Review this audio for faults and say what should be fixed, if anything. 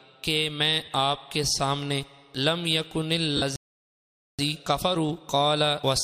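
Brief smeared, noisy patches replace the sound at 0.85–0.88 s (30 ms) and 3.37–3.42 s (50 ms). These are lost LE Audio frames: the durations fit three and five 10 ms LC3 frames dropped on the Bluetooth link. The decoder covered each gap by replaying the last good spectrum with randomised phase signs, which turns tonal content into a hiss-like blur. Improving link robustness, through better antenna placement, less 2.4 GHz congestion or more retransmission opportunities, would prevent these drops.

From 3.56 s to 4.39 s the audio stops dead for about 0.83 s, mid-flow, then resumes. This playback stall is likely caused by the player's buffer running dry or its audio thread being blocked, so nothing reached the output until data flowed again. Coming so soon after the 3.37 s frame loss, it fits a link hiccup draining the buffer. A deeper jitter buffer and a higher-priority, non-blocking audio thread should prevent it.

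From 4.39 s to the end the sound runs hurried, about 1.15 times normal speed, with pitch unchanged. This is time-compressed catch-up: after the stall the player works off its backlog by cutting out short segments and cross-fading the joins. Avoiding the stall removes the need for catch-up, and a gentler compression rate would make any remaining catch-up less audible.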